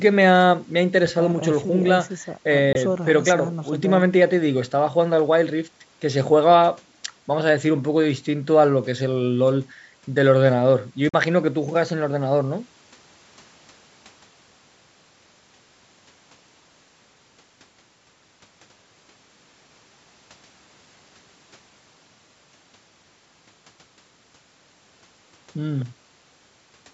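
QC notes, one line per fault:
2.73–2.77 s and 11.09–11.14 s: Bluetooth dropout. Packets likely arrived too late and were dropped, leaving silent gaps of about 21 and 43 ms before sound resumes further on.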